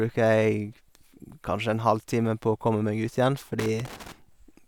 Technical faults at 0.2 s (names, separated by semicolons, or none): none